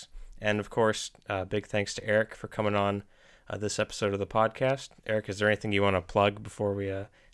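From 2.5 to 4.5 s, the resampler restarted on every block: each 250 ms block was converted in isolation, leaving edge errors heard as regular ticks at 4 Hz.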